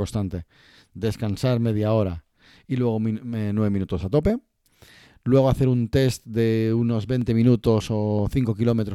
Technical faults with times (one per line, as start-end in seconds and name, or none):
0.41-8.19 clock drift buffer slips